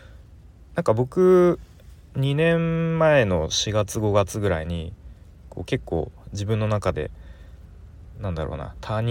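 No technical faults can be heard anywhere in the speech.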